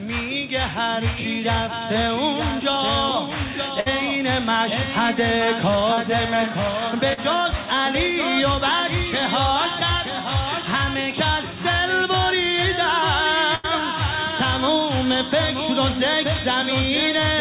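At 3.80 to 3.88 s there is a burst of packet loss: about 60 ms of audio arrived too late or not at all. The receiver kept extending the last sound for 57 ms, lowering it as it went, so a held buzz or fading hiss stands in for the lost stretch. Playback then jumps ahead with that part missing. The same thing happens at 13.55 to 13.66 s on a larger scale. About 80 ms is gone and 84 ms of decaying fill covers it, so the smear lasts longer there.

Two short concealed packet losses fall at 5.94 to 5.99 s and 7.13 to 7.19 s. In each, about 40 ms failed to reach the decoder in time. The gap was patched with 34 ms and then 40 ms of sound continued from what came before, copying its pitch or shaping noise, and then blended back into the real audio. Each is heard as a brief smear or wobble, and a short consonant-like sound can drop out.

All of this rides on a call path with no content above 4 kHz, which fits a G.711-style telephone codec.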